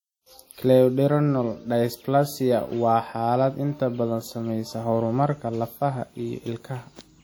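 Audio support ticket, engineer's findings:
Throughout: ringing, washy speech, hiss breathing with the signal. Likely WMA compression: quantisation noise smeared across transform blocks, consistent with a bitrate around 48 kbps.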